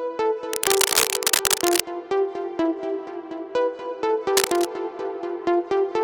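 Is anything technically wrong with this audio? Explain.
Yes. Cable scratch noise occurs from 0.53 to 1.80 s, somewhat louder than the sound, and from 4.37 to 4.68 s at roughly equal level. Likely a worn cable or connector moving, its contact resistance flickering into dense, irregular scratching. A spectrogram shows ragged broadband streaks; the waveform, clustered uneven spikes.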